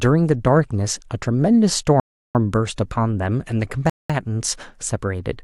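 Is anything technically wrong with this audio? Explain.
Yes. The speech drops out twice. From 2.0 to 2.35 s it cuts to silence for 350 ms. From 3.90 to 4.10 s it goes silent again for 200 ms. Each time the speech then resumes. This pattern is likely a Bluetooth stall. Radio interference delays packets to the headphones. Their buffer empties before the resent packets arrive. Playback simply halts until the data catches up.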